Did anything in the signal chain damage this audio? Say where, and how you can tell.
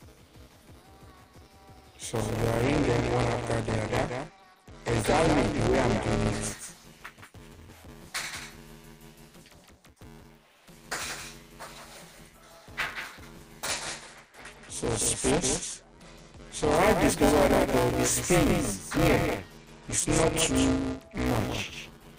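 Yes. A doubled audio track runs throughout: a full-band copy about 5 dB down trails by roughly 200 ms with no decay, likely from a second, slower capture path.

At the driver or buffer stage, buffer tearing gives a constant 188 Hz buzz with signal. About a third of each period repeats audio around 10 ms old, which fits a 256-sample buffer.

At the codec stage, a Bluetooth SBC bit pool drop dulls the treble and adds gritty noise at 2.63–6.47 s, 13.66–16.75 s and 19.58–21.26 s, which points to the bit pool falling to about 12 on a congested link.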